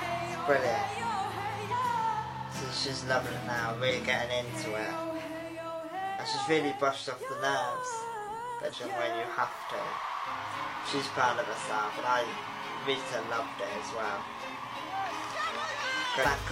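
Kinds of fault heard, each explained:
Damaged data in a compressed stream: corrupted bytes make the decoder misread frames and hunt for the next header, giving 44 to 60 ms glitches at 1.68, 3.86, 8.69 and 16.21 s, seen as brief breaks on a spectrogram and in the waveform.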